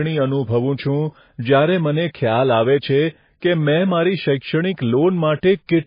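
MP3 compression runs through the whole clip: the speech has no content above 5 kHz, so sibilants lose their edge and sound dull, while the remaining band has a watery, swirling quality with metallic chirps on s sounds. The cause is likely heavy MP3 encoding at a starved bitrate, which fits roughly 18 kbps. The encoder removes the top of the spectrum outright and drops weak frequency lines that flicker on and off between frames.

Pre-echo appears from 3.40 to 3.42 s, just after "આવે છે": a brief hiss of about 20 ms arrives ahead of a sharp onset, and the attack itself sounds softened and smeared. The codec spreads its quantisation noise across an entire transform block, so when a sudden loud event lands late in that block, noise scaled for the loud part leaks into the quiet moment before it and announces the attack early.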